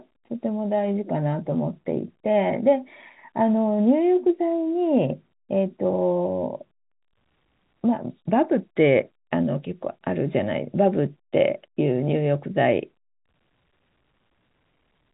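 Telephone-band speech with no audible technical faults.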